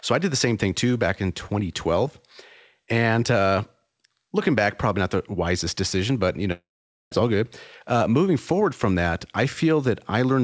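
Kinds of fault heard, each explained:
Long network dropout: at 6.52 s the sound decays into a fading buzz, then near-silence until 7.13 s; about 0.6 s is lost, likely from missing packets.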